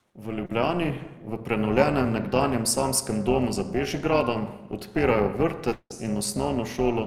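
Overlap-add ripple runs through the whole clip. The frames were windowed and rejoined with an overlap whose gains don't sum evenly, so the level dips and swells by about 11 dB around 300 times a second. That gives the speech a metallic buzz.

Automatic gain rising occurs from 0.05 to 1.80 s. The gain control judged the input too quiet and raised its gain gradually by about 6 dB. The speech and the background noise swell together over almost two seconds rather than jumping.

Short concealed packet loss occurs at 0.45 to 0.51 s. About 40 ms of audio arrived too late for the decoder. The receiver covered 34 ms of that gap by extending the preceding sound and then blended back in, which leaves a brief smear or wobble.

A long network dropout occurs from 5.72 to 5.92 s, most likely a network outage. The last sound is stretched into a fading buzz or hiss lasting roughly 0.18 s, with about 60 ms of near-silence. 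The speech then resumes further on, and the missing stretch is simply gone.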